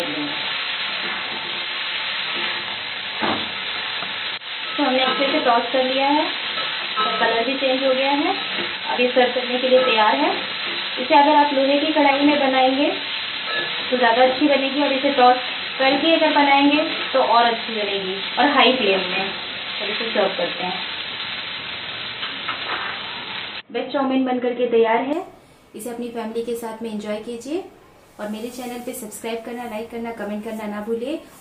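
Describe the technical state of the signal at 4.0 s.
At 4.0 s the sound is dull and boxy, with nothing above 4.1 kHz, from 0.0 to 25.13 s, likely because the input switched to a poorer device. A faint new noise floor, with no level jump, separates it from a simple low-pass filter.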